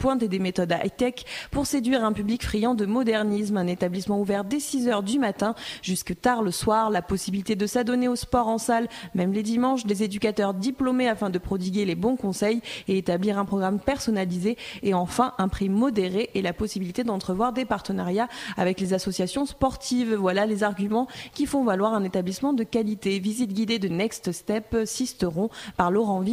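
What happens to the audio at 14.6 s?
Nothing goes wrong at 14.6 s; the audio runs through that moment intact, with no dropout, glitch or distortion.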